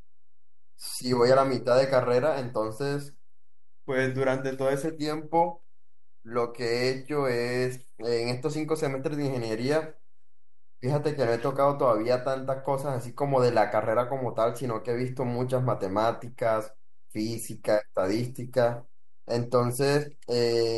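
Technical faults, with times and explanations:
Throughout, DC offset: the whole speech waveform sits shifted off zero by a constant of about -40 dBFS. You won't hear it as such, but it shows up as steady energy right at 0 Hz and quietly eats a bit of headroom.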